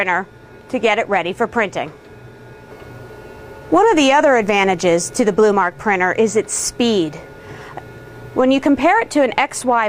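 Nothing stood out on listening to this audio.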